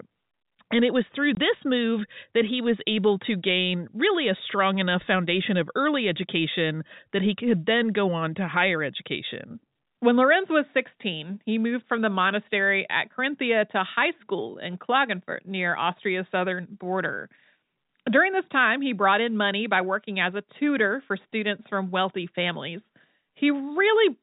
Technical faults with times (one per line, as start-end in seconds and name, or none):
1.35-1.37 packet loss filled with silence